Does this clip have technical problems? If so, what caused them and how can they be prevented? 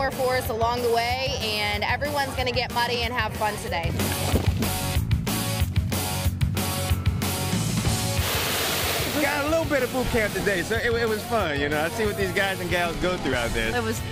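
Yes. Brief skips at 1.41, 7.37, 10.35 and 13.33 s each drop a tiny slice. This is likely audio missing between chunks at 3-second boundaries. To prevent it, capture continuously with overlapping or double-buffered chunk handoffs.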